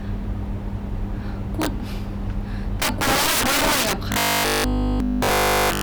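Integer overflow runs through the whole recording. Gain about 15 dB too high makes the loudest peaks wrap to the opposite sign, giving sharp, violent cracks.

From 4.12 to 5.82 s the speech turns into a rigid, metallic buzz at 50 Hz. A likely cause is robotic sound from repeated short buffers, with each 20 ms piece repeated in place of new audio.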